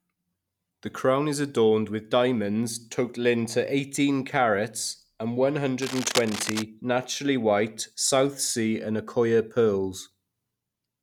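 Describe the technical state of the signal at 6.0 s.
At 6.0 s the speech is overlaid by cable scratch noise, running from 5.82 to 6.63 s, after "eighteen carats and one" and before "naturally white". Dense, uneven crackling bursts sit only slightly below the speech, most likely from a worn cable or connector shifting its contact resistance.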